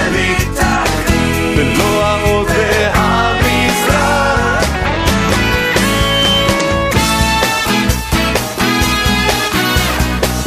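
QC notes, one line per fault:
5.79–6.68 s, loudspeaker feedback squeal: a 3.1 kHz tone swells over roughly 0.4 s to about signal level, as the mic-to-speaker loop gain passes unity.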